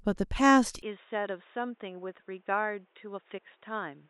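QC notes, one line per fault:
0.82 s to end, input switched to a poorer device: the capture most likely changed from the original microphone to a narrower-band input, such as a headset's call profile, with no gap at the switch. From that point the speech loses everything above about 3.8 kHz and turns dull and boxy, drops roughly 10 dB in level, and carries a new, faint background noise sitting about 40 dB below the speech.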